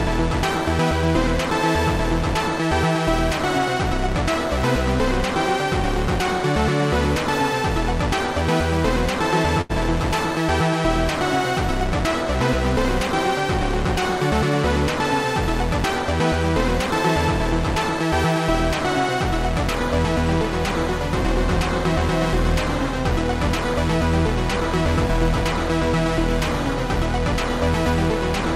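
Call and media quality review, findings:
Short stall from a late packet, 9.61 to 9.71 s. Packet arrived late, jitter buffer underran, receiver concealed by extending the last sound for about 80 ms, then resumed from the same point. Nothing dropped. Playout delay grew by 80 ms and stays that way afterwards. Audible as one sound held unnaturally long, slight buzzy or dipped texture during the hold, then normal continuation. Probable component: jitter buffer sizing or network delay spike upstream.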